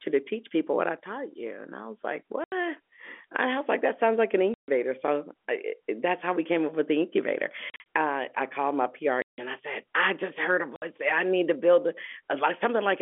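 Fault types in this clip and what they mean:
Packet loss filled with silence: Lost packets were replaced with dead silence. The speech cuts out at 2.44, 4.54, 7.7, 9.22 and 10.76 s, for 60 to 160 ms each. The gap lengths fit 20 ms packets. The 7.7 s loss comes in short bursts.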